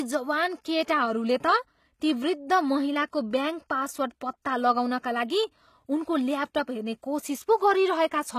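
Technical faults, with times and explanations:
throughout, HE-AAC compression: likely a low-bitrate HE-AAC path rebuilding treble from copied lower bands, leaving gritty, lispy s sounds and nothing above 14.9 kHz.
3.11–3.13 s, pre-echo: block-wide quantisation noise spills about 24 ms ahead of a sharp attack, adding brief hiss and softening its onset.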